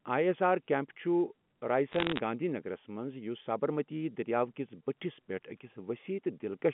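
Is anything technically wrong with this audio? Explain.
Yes. Bit errors on a digital phone line occur from 1.92 to 2.19 s. There, a small fraction of bits, well under one percent, arrive flipped. Each flip corrupts one sample, and hits on the sign or upper bits jolt the waveform, producing sharp ticks and crackle laid over the speech within the narrow 150 Hz to 3.4 kHz telephone band of the G.711 A-law line.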